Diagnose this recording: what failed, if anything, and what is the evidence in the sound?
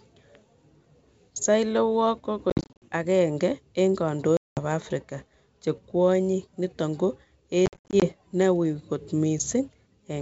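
Hard-edged silent holes cut the speech at 2.50–2.86 s, 4.37–4.59 s and 7.66–8.07 s, the first and last broken into gaps of up to 50 and 60 ms. This is network packet loss on an ADPCM call: the decoder's predictor and step size lose step with the sender's.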